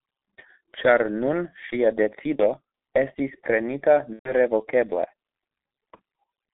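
G.723.1 codec throughout this speech clip: the sound is muffled and hoarse with blurred consonants, passing roughly 250 Hz to 3.7 kHz, which fits a heavily compressed codec near 6 kbit/s. VoIP packet loss concealed by the speech codec at 2.36–2.43 s, 4.13–4.32 s and 5.96–6.00 s: the decoder extrapolates from its last pitch and filter, giving a fading buzzy or noisy smear. The shorter gaps fit one lost 30 ms frame each, and the longer one fits about four.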